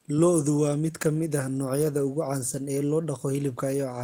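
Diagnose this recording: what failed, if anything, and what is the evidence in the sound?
Nothing failed here; no fault can be heard.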